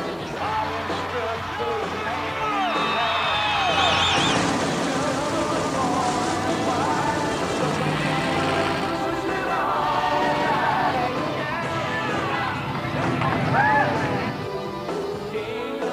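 The audio carries a doubled audio track from 3.8 s to 11.1 s. A second full-band copy of the sound runs about a fifth of a second behind the first. It is roughly as loud as the original. The copy has no decay or room colour, so it reads as a clean echo rather than reverb. It begins and ends abruptly. The likely cause is the same signal being captured again through a slower path, or an edit leaving two copies out of step.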